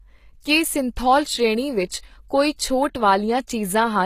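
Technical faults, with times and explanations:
Throughout: HE-AAC compression, likely, at a bitrate around 20 kbps. The treble is copied upward from lower bands, so sibilance sounds gritty and metallic, and nothing sits above 14.9 kHz.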